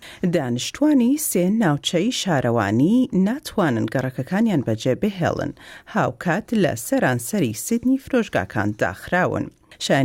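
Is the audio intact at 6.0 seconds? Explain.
Yes, the audio is intact at 6.0 seconds, with no dropout, click, distortion or other fault at that point.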